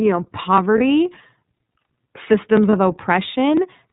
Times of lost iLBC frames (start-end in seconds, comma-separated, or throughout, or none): 0.78-0.81, 2.70-2.74